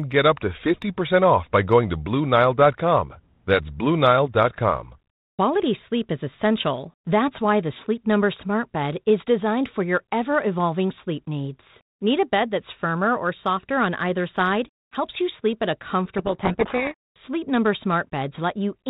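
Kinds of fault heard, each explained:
Codec payload misread: From 16.18 to 17.16 s the speech is buried in harsh, rasping distortion. The sound points to G.726 code words being unpacked in the wrong bit order. Each rebuilt sample difference is then wrong, so errors pile up.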